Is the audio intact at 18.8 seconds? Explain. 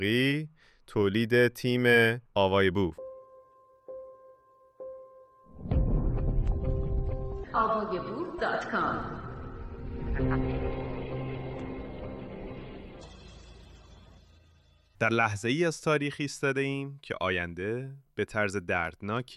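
No. A Bluetooth SBC bit pool drop begins at 18.75 s and lasts to the end at 19.36 s. With the wireless link congested, the sender cut the encoder's bit budget, so the highest sub-bands received almost nothing and the remaining bands were quantised coarsely. The sound turns duller in the treble, with a gritty, grainy noise layered over it. The degradation fits a bit pool falling from around 28 to 13, near 102 kbps.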